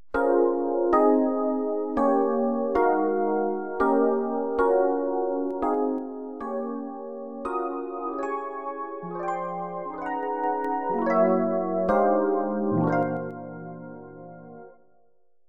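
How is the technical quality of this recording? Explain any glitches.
The recording has zipper noise three times. From 5.39 to 6.13 s the level drops by about 10 dB, from 10.12 to 10.77 s it rises by about 10 dB, and from 12.82 to 13.38 s it drops by about 10 dB again. Each change comes in unsmoothed steps of about 3 dB, a handful per second, and every jump leaves a small click, so you hear a ticking, zippy texture while the level moves.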